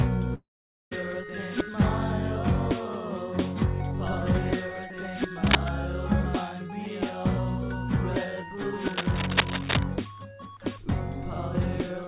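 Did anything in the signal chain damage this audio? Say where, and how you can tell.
Yes. At the network stage there is a long network dropout from 0.34 to 0.93 s, likely from packets that never arrived. The last sound is stretched into a fading buzz, then near-silence. On a spectrogram, smeared, decaying bands give way to an empty gap below the 4 kHz ceiling of the G.711 call path.

In the analogue wiring there is cable scratch noise at 5.46 to 5.69 s, about 5 dB above the sound, and at 8.79 to 9.84 s at roughly the level of the sound. This is likely a worn contact whose resistance flickers. The waveform shows dense, ragged spikes, and the spectrogram shows broadband speckle.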